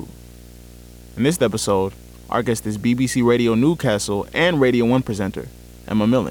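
From the first moment to the last, a video or display buzz sits under the speech. A screen or video cable is leaking into the audio path. The picture refreshes 60 times a second, and that field rate comes through as a steady 60 Hz buzz. A gritty hash rides on top of it. The buzz stays roughly 25 dB below the speech. It never stops, so it is clearest in the pauses.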